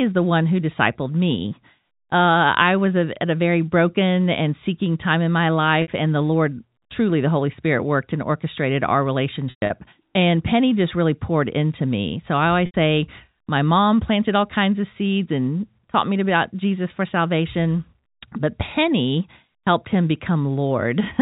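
At 5.82 s, 9.50–9.70 s and 12.66 s, packet loss with pitch repetition fills 60, 160 and 80 ms gaps with a looped pitch period, giving a held buzz that fades into silence on the longer losses.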